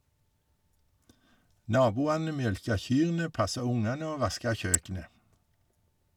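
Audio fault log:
4.74 s, electrical switching spike: a sharp snap or tight cluster of clicks lands on top of the speech, peaking fairly high at around -10 dBFS and lasting just under a hundredth of a second, likely a nearby switch or static discharge arcing and being picked up by the audio line.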